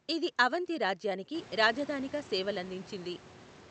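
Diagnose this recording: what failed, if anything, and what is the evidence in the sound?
Nothing in this recording points to a failure at any stage. The background noise of the room swells by about 21 dB from around a second and a half and still sits about 21 dB under the speech, and the high end stops near 8 kHz, as expected from an Opus call path.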